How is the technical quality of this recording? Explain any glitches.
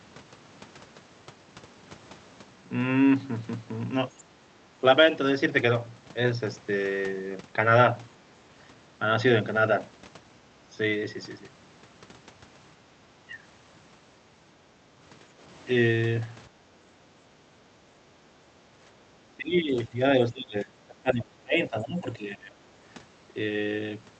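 The recording has echo-canceller trouble: the room background gets gated several times, and the talker gets squashed when both ends talk at once. It's all riding on a call codec whose top end stops around 8 kHz, which fits Opus at roughly 48 kbps.

Background gated by the echo canceller, at 4.37–4.57, 8.16–8.3, 16.5–16.71 and 17.31–17.86 s: while the far end plays, the canceller clamps the mic, so the room tone dips by about 6 to 8 dB, and about 12 dB in the last one, then springs back.

Speech suppressed in double talk, at 12.78–13.43, 16.99–17.03, 18.64–18.68 and 19.29–22.53 s: the talker's level drops, roughly 10 to 15 dB in the short ones and around 25 dB over about two seconds of the long stretch. That's likely the canceller failing to separate the talker from the echo and turning both down.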